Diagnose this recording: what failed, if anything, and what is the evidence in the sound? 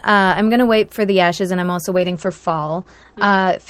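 A call bitrate drop at the codec stage, driven by the call's bandwidth estimate, begins at 1.96 s and runs to the end of the speech. The top end collapses from full band to a cut-off near 8 kHz, and the sound turns rough and watery, consistent with the encoder falling from roughly 48 kbps to about 11 kbps. It holds at its worst for about 1.55 s. Unlike packet loss, there are no gaps or concealment glitches, just continuous coarse, muffled coding.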